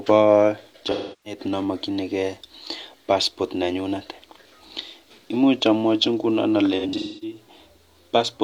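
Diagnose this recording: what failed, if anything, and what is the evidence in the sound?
The codec stage failed: AAC frame loss with concealment occurred twice in this speech. From 0.91 to 1.40 s, about 0.34 s of audio was lost, consistent with roughly eight frames, and the decoder rebuilt the gap from the last good spectrum, leaving a smeared, noisy patch. At 6.79 to 7.37 s, just after "amwochi nguno", losses scattered over about 0.43 s, the longest run near 0.3 s, produce a smeared, phasey texture as concealment fills the gaps from the last good spectrum.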